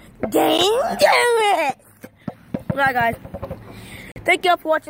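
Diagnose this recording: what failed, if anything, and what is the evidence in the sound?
Twice the sound drops abruptly to dead silence and snaps back with no fade: at 0.58 s a gap of about 11 ms is heard as a sharp tick, and from 4.12 to 4.16 s a gap of about 43 ms is heard as a short hole. These are blocks of digital silence from the driver or buffer stage. The output buffer likely wasn't filled in time, so zeros were played instead. The lengths fit a 512-sample buffer and a run of four such buffers.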